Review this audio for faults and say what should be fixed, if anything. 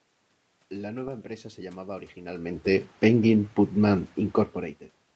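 Nothing here needs fixing; the level shifts around 2 s and 4.5 s come from the talker moving relative to the microphone, and the room noise and the top end stopping near 8 kHz are just what a normal call path gives you.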